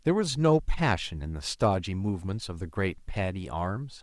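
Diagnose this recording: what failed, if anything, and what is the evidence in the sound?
Nothing in the signal chain can be heard to have failed, and the speech comes through continuously at a steady level, without any interruption or alteration pointing to a problem at any stage.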